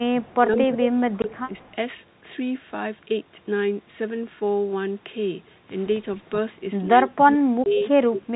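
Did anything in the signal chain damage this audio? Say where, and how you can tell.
Yes. Call processing, likely a far-end echo leak: a 150 ms delayed copy at 0.22–0.35, 0.81–0.88 (about −10 dB) and 1.57–1.72 s (about −35 dB).

Call processing again, likely with speech suppressed in double talk: the level dips at 0.43–0.48, 0.67–1.53, 6.89–7.77 and 8.08–8.28 s, by up to about 30 dB.

Network: packet loss filled with silence. There are hard-edged 20 ms holes at 1.22 and 7.64 s, each the length of one packet.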